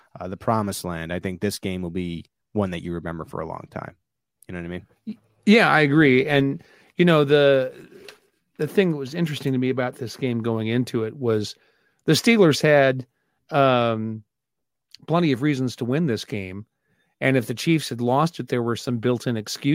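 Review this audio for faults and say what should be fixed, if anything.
No faults can be heard anywhere in the speech. There is nothing here that needs fixing.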